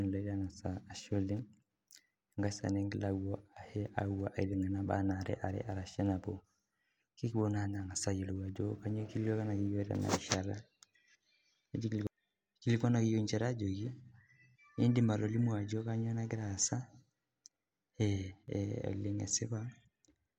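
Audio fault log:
18.31–18.48 s, sudden gain jump. The speech and the background noise drop together by about 6 dB for 0.17 s, then come back. The level steps with no ramp. A setting or bit shift applied at once is the likely cause.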